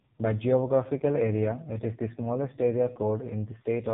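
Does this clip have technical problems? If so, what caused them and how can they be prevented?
Yes, the whole clip carries AMR narrowband mobile codec damage: nothing above 3.8 kHz, and heavily buzzy, synthetic speech that fits the 5.15 kbps mode. Keep a wideband or higher-bitrate path instead of routing it through narrowband mobile coding.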